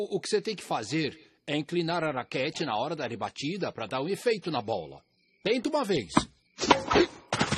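At 1.90 s the sound abruptly loses quality and stays degraded to the end. That's an adaptive stream at a lower bitrate: the player switched to a leaner version of the stream mid-play, with no gap at the join. Above 13.8 kHz there's nothing left, and the compression artefacts thicken. The drop fits an AAC stream falling from around 96 kbit/s to something like 27 kbit/s.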